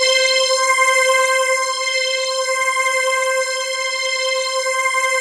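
From 0.03 to 1.32 s the audio shows hard clipping: peaks exceed the stage's limit by about 2 dB and are sliced flat, giving a light crackle on loud moments. The waveform shows squared-off tops; a spectrogram shows brief vertical smears of high harmonics.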